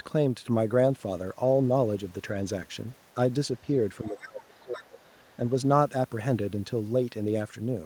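A speech recording in which, from 4.04 to 4.99 s, the talker's voice sinks sharply, falling at its deepest by roughly 25 dB over about a second. This is speech suppressed in double talk, likely caused by the far end talking at the same moment: unable to tell the local voice from the loudspeaker echo, the echo canceller turned the whole signal down and took the talker with it. Inside that same stretch, a faint second voice slips through, from 4.04 to 4.22 s and again, slightly louder but still well below the main speech, from 4.59 to 4.82 s, with a barely audible scrap just after it at 5.02 to 5.06 s. These are the other side's voice leaking through, likely echo from the device's loudspeaker that the canceller failed to remove fully from the microphone.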